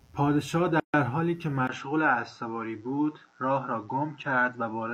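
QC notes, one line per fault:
Throughout: mains buzz. A faint, steady, raspy buzz sits under the speech at about 40 dB below it. Its fundamental is 60 Hz, and a stack of harmonics extends well up into the kilohertz range, which gives it its edge rather than a smooth hum. That spiky spectrum comes from sharp switching pulses, such as those from a dimmer or rectifier, or from an unshielded line, leaking in twice per mains cycle.
0.80–0.94 s: gap at a join of encoded pieces. The speech drops out abruptly for 140 ms and then resumes exactly where it left off, with nothing missing from the content. The edges of the gap are smeared. This happens when separately encoded segments are concatenated without trimming. The encoder's start-up delay and the padding of the final frame both stay in the stream as silence.
1.67–4.93 s: input switched to a poorer device. After a 20 ms dropout, the speech turns duller and boxier for the rest of the clip, with nothing above 7.9 kHz. 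Loudness stays about the same, but a new background noise floor appears very roughly 55 dB below the speech. This points to the recording system likely changing its input mid-take to a narrower-band microphone or a headset call profile.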